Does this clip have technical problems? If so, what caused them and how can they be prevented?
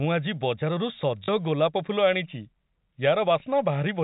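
Yes, there's packet loss with last packet repeated: at 1.24 to 1.28 s and 3.40 to 3.42 s, the previous 20 ms chunk replays, giving a short robotic stutter and a small blip. A jitter buffer and proper packet loss concealment would prevent it.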